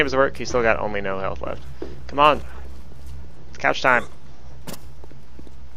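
No technical faults can be heard in this clip.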